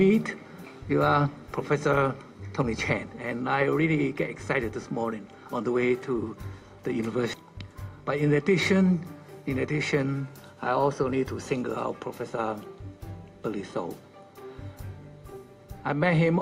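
Around 7.33 to 7.35 s there's a skip ahead. The audio jumps forward with no fill at all, and something like 0.4 s of material simply never plays. That's what you get when a chunk gets dropped because newer audio was already queued behind it, whether it went missing in transit or the jitter buffer overflowed and threw it away. The two sides are butted straight together, so it sounds like an abrupt splice rather than a gap.

Right after that come two bursts of jitter buffer speed-up, from 7.89 to 8.28 s at about 109% speed and from 9.35 to 10.07 s at about 107%. Each one trims roughly 50 ms in total. The receiver was holding more audio than it wanted and shaved out tiny pitch-period-sized slices back to back to pull the delay down. Pitch stays put, but those stretches feel noticeably rushed, like the sound briefly hurrying to catch up.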